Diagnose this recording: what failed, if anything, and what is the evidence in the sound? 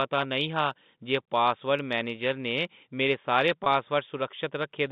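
The network stage failed, with packet loss and pitch repetition at 3.64 to 3.66 s, right after "मेरे सारे". About 20 ms of audio went missing, which fits a single lost packet. The receiver bridged it by repeating the last pitch period, heard as a brief, slightly buzzy hold over the narrow G.711 telephone band.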